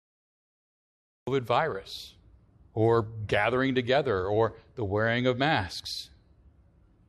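The recording began late, a cut-off start: digital silence runs until 1.27 s, then the speech jumps in mid-sound with no natural attack or fade-in.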